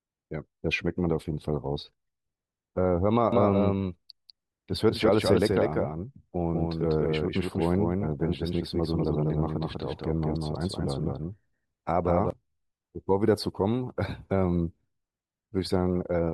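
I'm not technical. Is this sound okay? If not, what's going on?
No. A doubled audio track runs from 3.32 to 12.30 s: a slightly quieter copy of the speech trails about a fifth of a second behind, likely from a second recording path.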